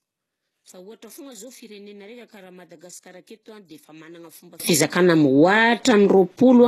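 From 0.0 to 4.6 s, one channel inverted: summed to mono, the centred speech drops by about 26 dB and leaves a faint residue, likely because one channel's polarity was reversed so the shared content cancels. After 4.6 s the speech returns at full level.

Throughout the clip, nothing is present above 12.3 kHz, and the speech carries the artefacts of a very low-bitrate encoding. This is low-bitrate audio saved at a high bitrate, likely an earlier low-rate pass re-encoded as a high-rate MP3 that cannot restore what was lost.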